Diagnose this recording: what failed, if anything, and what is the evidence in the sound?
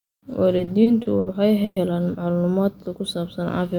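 Repeated stalls (stutter) between 0.57 and 1.28 s, at the network and jitter-buffer stage. The speech halts five times, with about 170 ms of held-over sound filling the gaps, the longest 70 ms, so roughly a quarter of that stretch is concealment. No speech is lost, but delivery drags. Packets were arriving more slowly than playback consumed them, so the buffer kept draining and the receiver extended the last sound each time until data resumed.

A call audio freeze from 1.64 to 1.78 s, also at the network stage. The speech stops and the last sound carries on as a decaying tail for about 120 ms, ending in roughly 30 ms of silence before the speech picks up exactly where it left off. Nothing is missing; instead about 120 ms of extra delay has been inserted. The likely cause is a burst of packets held up in transit, emptying the jitter buffer.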